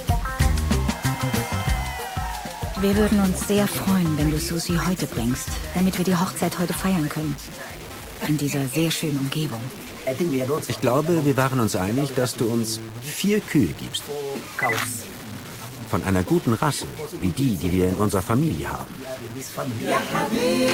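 From start to finish the sound is grainy and gritty, with distortion tracking the signal only about 20 dB down, likely low bit depth without dither, truncated to roughly 6 bits. From 17.01 to 19.01 s codec artefacts rise suddenly, then recover: an adaptive stream dropping to a lower bitrate, consistent with a switch from 64 to 16 kbit/s.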